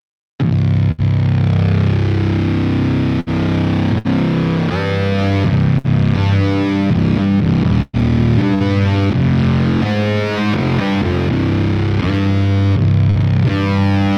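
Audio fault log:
0.91 s, 3.20 s, 3.98 s, 5.78 s and 13.10 s: burst of packet loss. Each lasts about 0.1 s. The receiver holds the last sound for roughly 60 ms while fading it down. About 60 ms of audio is then skipped before playback resumes.
7.82 to 8.63 s: repeated packet loss (robotic sound). Three gaps fall close together, the longest 113 ms. Each is patched by stretching the last sound, so about a fifth of this stretch is filler. It sounds choppy, with about 180 ms lost.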